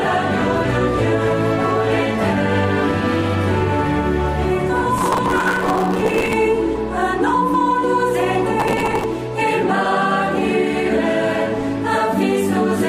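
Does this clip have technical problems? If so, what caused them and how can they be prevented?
Yes. Processor overload crackle runs from 4.98 to 6.33 s and again from 8.60 to 9.04 s. Short buffers of around 5 ms miss their deadlines repeatedly and replay stale audio with hard edges, giving a gritty tearing rather than the single clean gaps of dropouts. Larger buffers or a lighter processing load would prevent it.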